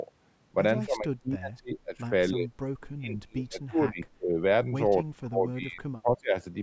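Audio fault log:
0.86–2.12 s, 2.32–2.49 s, 2.95–4.4 s, 5.03–5.83 s and 6.01–6.35 s, speech suppressed in double talk. The speech dips in these spans. The deepest cuts reach about 35 dB near 5.03–5.83 s. The brief 2.32–2.49 s dip is only about 10 dB. The likely cause is an echo canceller that mistook the talker for far-end echo while both sides spoke. It then turned down everything together.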